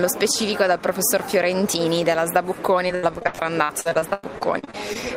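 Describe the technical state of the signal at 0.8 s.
At 0.8 s the signal is intact, with no audible fault at that point.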